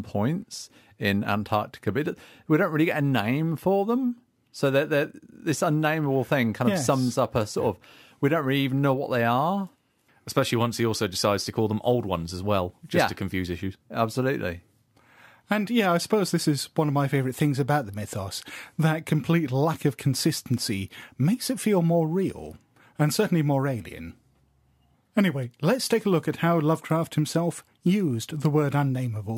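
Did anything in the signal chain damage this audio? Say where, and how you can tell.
Yes. The damage is at the sample-format conversion stage, as a crude rate conversion running through the whole speech clip. A gritty, inharmonic fizz rides on the voice, strongest on loud passages and sibilants, sitting roughly 25 dB below the speech. The pattern fits a nearest-sample conversion from 32 kHz up to 48 kHz. Samples were simply repeated with no interpolation filter, so a periodic stepping error produces shifted, inharmonic copies of the voice.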